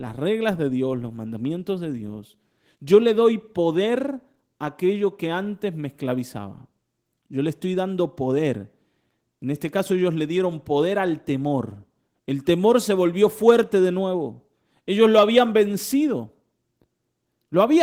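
No technical faults are audible.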